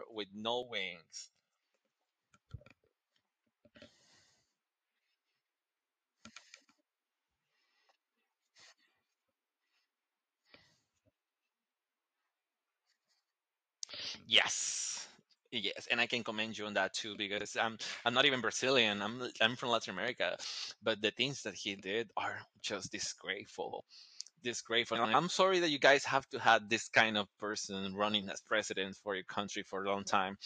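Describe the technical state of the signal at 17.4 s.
At 17.4 s the decoder received frames out of order. Between 17.38 and 17.46 s, two neighbouring runs of frames, which points to runs of about two frames each, arrived swapped and were decoded in that arrival order. This 80 ms stretch of speech therefore plays with its halves exchanged. It comes across as a brief garbled flutter. No time is lost, and the speech resumes on schedule afterwards.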